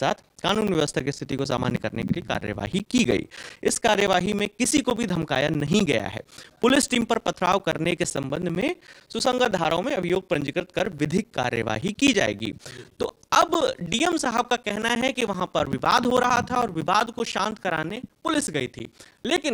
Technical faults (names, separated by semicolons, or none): periodic USB or driver dropouts